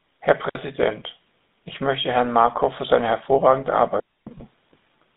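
Throughout, the speech carries the GSM full-rate codec: the vocal tract is modelled and driven by a sparse pulse train, and the result is a buzzy, gravelly roughness with a band of about 200 Hz to 3.7 kHz, consistent with the 13 kbps full-rate mode.

From 0.49 to 0.55 s a digital wireless dropout mutes the signal for 60 ms. The receiver lost too much data and faded out almost instantly, leaving a clean near-silent gap with no noise burst on either side.

A second digital wireless dropout follows right after "für seine hervorragende", from 4.00 to 4.27 s. This is a 270 ms mute, and again the hole is clean, with no crackle or hiss at its edges.

At 4.38 s there are lost GSM frames. A 20 ms loss, which fits a single dropped frame, was concealed by repeating the last good frame's parameters. The result is a brief rough, metallic ring rather than silence.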